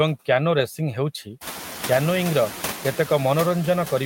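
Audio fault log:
throughout, noise suppressor artifacts: the suppressor pulls down only about 1 dB in the bands it judges to be steady noise, so the room noise, which climbs by about 20 dB at roughly 1.5 s and then sits about 14 dB under the speech, barely sinks between words. On a spectrogram the noise floor shows only a faint frame-by-frame dimming in the gaps; the waveform's low-level floor stays almost level rather than dropping between phrases.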